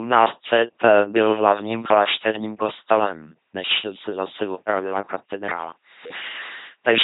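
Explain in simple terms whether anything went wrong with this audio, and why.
Something did go wrong, and it lasts from start to end. The speech has passed through an LPC-10 vocoder, and the damage is heavy. This system does not send the real voice. It sends a rough recipe for the mouth's shape, then rebuilds the sound from a steady buzz or a hiss. Each instant must be one or the other. So the voice sounds buzzy and robotic. Nothing comes through above about 3.9 kHz, which makes it dull.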